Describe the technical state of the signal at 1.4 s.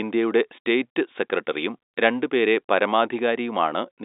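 At 1.4 s the signal is intact, with no fault: the speech carries the narrow telephone band of G.711 coding, with nothing above about 3.8 kHz.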